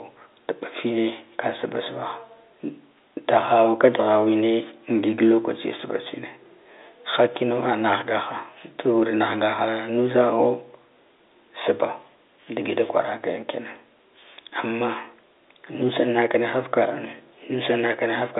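Nothing is technically wrong with this speech clip, which carries the narrow band of an ordinary telephone line.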